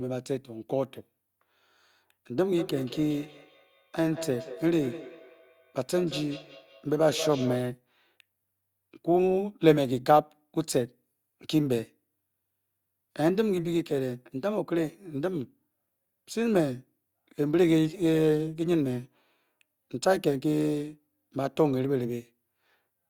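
From 2.57 to 7.74 s there's feedback echo between two devices: a second device replays the speech into this microphone, so it returns roughly every fifth of a second, peaking about 13 dB down.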